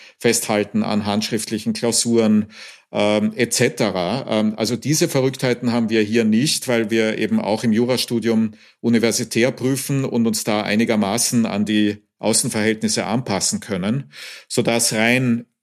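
No technical faults are audible anywhere in the speech.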